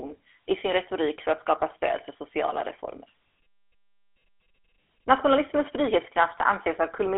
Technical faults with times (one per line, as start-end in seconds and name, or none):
0.00-7.17 GSM full-rate codec